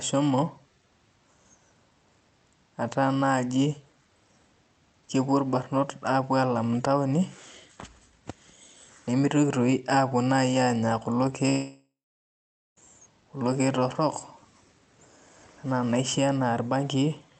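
From 11.49 s to 12.78 s the speech breaks off in what sounds like a long network dropout, with about 1.3 s of audio lost. The receiver carries the last sound forward as a buzz that decays, and for roughly the final 0.83 s of the gap only silence remains. Speech resumes at 12.78 s with the lost section simply absent. The likely cause is a run of packets that never arrived over the Opus call path, whose audio tops out near 8 kHz.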